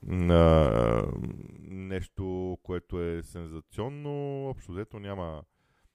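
From 1.26 to 1.9 s there's zipper noise: the speech gets pulled down by around 20 dB in 1 dB jumps with no smoothing, roughly fifty a second, so each jump clicks and you hear a fast ticking ride on the fade.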